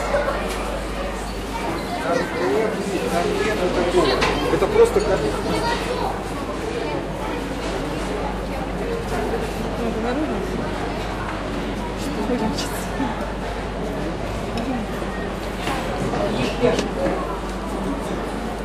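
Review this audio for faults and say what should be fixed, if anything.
Frames out of order occur at 2.03–2.42, 5.32–5.64, 7.60–8.01, 9.41–9.82, 12.24–12.56, 14.89–15.29, 16.42–16.83 and 17.68–18.08 s. In each, two adjacent blocks of about 186 ms, or 139 ms at 5.32 and 12.24 s, play swapped. This gives a garbled flutter. No time is lost. Buffer and reorder incoming frames by sequence number before decoding.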